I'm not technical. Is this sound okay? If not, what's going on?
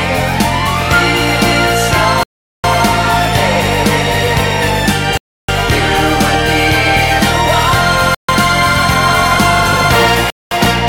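No. The sound drops to silence four times: at 2.23 s for about 0.41 s, 5.17 s for 0.31 s, 8.15 s for 0.14 s, and 10.30 s for 0.21 s. Each gap is likely a Bluetooth stall, where wireless interference delays audio and playback pauses until it arrives.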